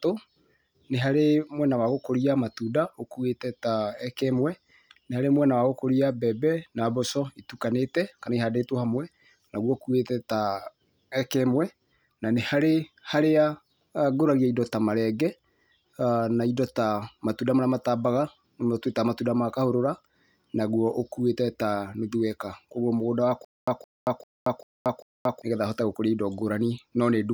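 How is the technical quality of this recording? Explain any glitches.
Quality is marred by one glitch near the end. From 23.45 to 25.42 s, just before "hote gũkũria indo", there's a stutter with silent gaps. A 166 ms burst repeats five times, every 394 ms, with 229 ms of dead silence between. That's likely a stalled stream replaying its last chunk, so the speech in that stretch is lost.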